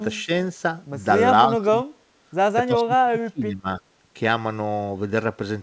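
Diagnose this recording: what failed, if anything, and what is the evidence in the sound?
The echo canceller likely suppressed speech in double talk, unable to separate it from echo. The level dips about 10 dB at 0.24–0.30 and 1.49–1.78 s, and about 25 dB across 2.66–3.67 s.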